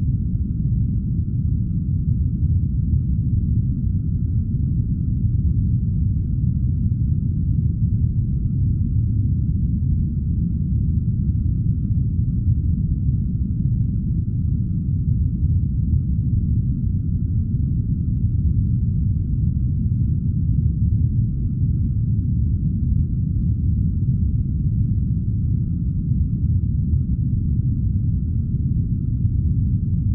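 A run of three short ticks, the longest well under a millisecond, breaks into this recording of sounds between 23.07 and 23.43 s. These are CD scratch ticks. A scratch or blemish on the disc wiped out more data than error correction could restore on each pass, and the player filled the gaps by interpolating or muting.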